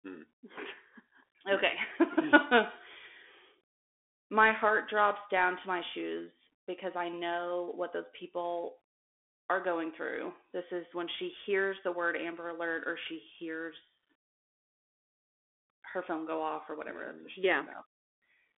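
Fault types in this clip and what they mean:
Bluetooth CVSD headset codec: the speech runs through the narrowband headset link, coding one up-or-down bit per sample, so nothing survives above about 3.7 kHz and the line sits in a thin 250 Hz to 3.5 kHz band. Sibilants go scratchy, loud bright bits distort, and there's a grainy hiss underneath throughout.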